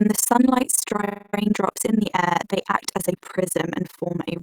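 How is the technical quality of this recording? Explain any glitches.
The quality is poor: the speech carries overlap-add ripple throughout. Windowed frames were rejoined with overlaps that don't sum to constant gain, so level dips by about 60 dB roughly twenty times a second, giving a harsh, fast flutter. The waveform shows a regular comb-like envelope; the spectrogram, evenly spaced vertical stripes.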